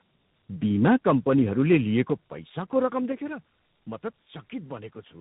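Throughout, the speech carries tandem speech coding: two speech codecs in a row, which fits G.729A followed by G.726 with a G.711 link between. The second coder re-encodes the first one's damage, so the sound is rough, warbly and muffled, with nothing above 3.8 kHz. A single low-rate codec would sound less rough and less compounded.

From 1.7 to 2.01 s, just before "पैसाको रकम", peaks are flattened by about 2 dB, most likely from microphone overload at the converter. Only a small share of samples is cut, producing a brief harsh crackle on the loudest syllables, unlike the steady roughness of the coding.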